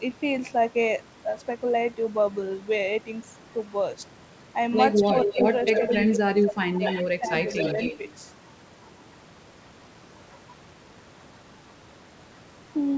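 From 5.03 to 5.47 s there's an echo leak: a copy of the speech comes back roughly 0.24 s late, about as loud as the original. It's likely a far-end speakerphone whose echo canceller let its pickup through. It returns, about 10 dB quieter, from 5.65 to 6.14 s.

Right after, from 6.16 to 6.85 s, you get speech suppressed in double talk. The canceller likely confused the talker with the echo and ducked both, dipping the speech by around 20 dB.

Echo leaks again from 6.83 to 7.07 s. A smaller dip, around 10 dB, follows at 7.19 to 7.32 s. The last echo runs from 7.46 to 7.98 s, with a brief, slight dip from 7.73 to 7.79 s inside it.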